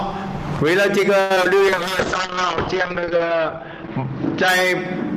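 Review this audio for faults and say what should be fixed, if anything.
Repeated packet loss (robotic sound) occurs from 1.20 to 1.46 s. Four holes, the longest about 99 ms, are patched by stretching the previous sound, so nearly half that stretch turns choppy. Unlike a bitrate drop, it breaks up rather than dulls.

A call bitrate drop runs from 1.69 s to the end. The top end collapses from 20 kHz to 8 kHz, and coarse, watery coding holds at its worst for 1.54 s. This fits an encoder forced from about 128 kbps down to around 10 kbps. It sounds continuously muffled, not broken up.

Both faults come from the network path, so a steadier connection with more jitter buffering and bandwidth headroom would prevent them.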